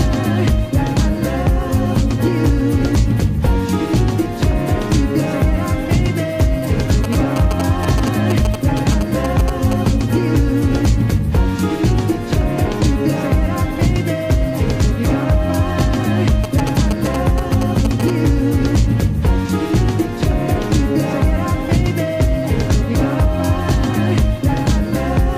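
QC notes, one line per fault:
7.04–9.88 s and 16.44–18.10 s: GSM signalling bursts. A nearby 2G phone's radio bursts are rectified in the audio circuit, giving galloping dit-dit-dit ticks and brief 217 Hz buzzes roughly 10 dB below the programme. Their clustered, intermittent pattern sets them apart from the steady buzz of an active call or mains hum.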